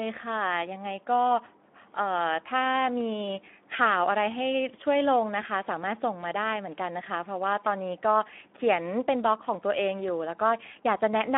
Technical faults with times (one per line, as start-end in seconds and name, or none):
0.00-11.37 Speex codec